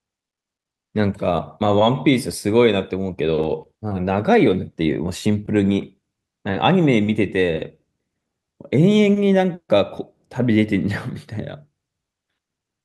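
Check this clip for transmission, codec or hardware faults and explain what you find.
Overlapping chunks are present, at 3.44 s and 8.45 s. The speech was handled in 5-second chunks, and each new chunk began slightly before the previous one had finished, so about 13 ms of audio at each join is played a second time. That brief duplication breaks the waveform's continuity, giving a click or stutter at each boundary, recurring at the same 5-second spacing.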